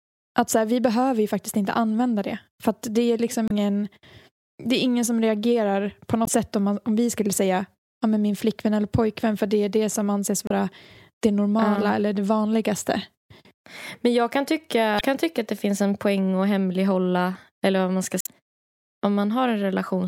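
Damaged data in a compressed stream corrupts frames, so the decoder misreads or rejects them and searches for the next frame header. In this speech, that disrupts the sound at 3.46–3.51, 6.24–6.29, 10.47–10.52, 14.97–15.01 and 18.18–18.27 s, each disruption lasting under a tenth of a second.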